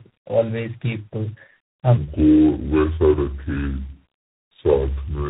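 From the start, tandem speech coding is audible. The speech sounds rough, muffled and warbly, with nothing above 3.8 kHz, which fits about three speech codecs in a row.

From 1.97 s to the end, a section plays at the wrong speed, 0.657 times normal. Pitch drops about seven semitones, and the speech turns deep and slow, likely from a clock mismatch.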